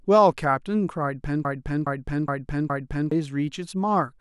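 A stall likely left the stream resending its last fragment: from 1.45 to 3.12 s, a broken-record loop repeats one 0.42 s slice four times.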